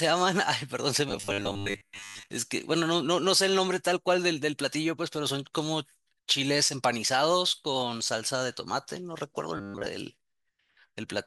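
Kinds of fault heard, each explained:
Robotic sound from repeated short buffers: at 1.09–2.28 s and 9.57–9.88 s, speech becomes a rigid 100 Hz metallic buzz, likely from about 10 ms chunks repeating while most real audio is skipped.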